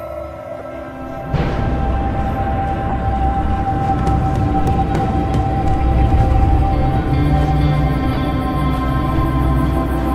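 At 0.58 to 0.62 s, 2.89 to 2.95 s and 8.13 to 8.18 s, corrupt frames are decoded: flipped bits misplace spectral energy across a few frames, producing short chirp-like bursts, the first peaking around -20 dBFS, the later two louder, near -5 dBFS.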